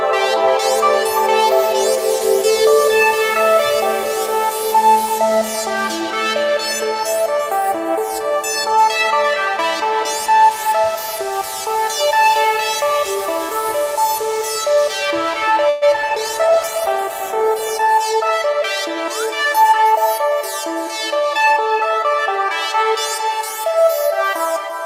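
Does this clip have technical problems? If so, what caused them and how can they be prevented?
Yes. At 15.69 to 15.84 s there is a call audio freeze: the last sound is stretched into a fading buzz or hiss for about 120 ms before the audio resumes where it left off. The likely cause is packets held up in transit until the jitter buffer ran dry. Nothing is lost, but the audio now runs about 120 ms later. On a spectrogram this shows as a smeared, decaying band with no new onsets. A larger jitter buffer margin or a more stable network path prevents it.

At 16.02 to 16.05 s there is short concealed packet loss. Some audio never reached the decoder in time, so the receiver extrapolated the previous sound and crossfaded back, leaving a brief smear or wobble. Only about 10 ms was synthesised, and roughly 20 ms of real audio is simply gone. On the waveform it appears as a tiny discontinuity, with a blurred vertical sliver on a spectrogram. 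Forward error correction or redundancy would cover single lost packets like this.

From 16.09 to 19.20 s there is a call bitrate drop. The bandwidth estimate collapsed, and the encoder fell from 64 kbps to 17 kbps, staying at the bottom for about 1.6 s. The audio turns coarse, watery and muffled as Opus discards detail and high frequencies. A spectrogram shows the upper bands suddenly emptied above a hard ceiling, then filling back in. Reserving steadier upstream bandwidth or reducing competing traffic keeps the rate up.

Two jitter buffer speed-ups follow, at 17.80 to 18.62 s and 19.26 to 19.73 s. After the freeze, the buffer held surplus audio, so the receiver cut out short pitch-period slices repeatedly. That plays the audio about 8 and 9 percent fast at unchanged pitch, trimming roughly 70 ms and 50 ms. The waveform looks subtly compressed in time, with no spectral shift. Smoother packet delivery, or gentler buffer adaptation, avoids the hurried sound.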